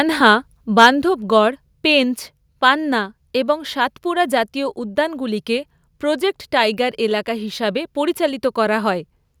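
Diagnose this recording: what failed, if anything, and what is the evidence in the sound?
A harsh crackle from 0.78 to 0.87 s is flattened peak tops, likely microphone overload driving the converter about 4 dB past full scale.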